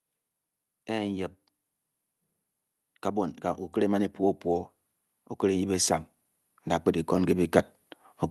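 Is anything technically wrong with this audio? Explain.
Yes. The speech and its background swell up together three times, by about 4 dB from 3.13 to 4.52 s, about 3 dB from 5.16 to 6.09 s, and about 4 dB from 6.64 to 7.59 s. This is automatic gain rising: the gain control judged the input too quiet and raised its gain over roughly a second each time.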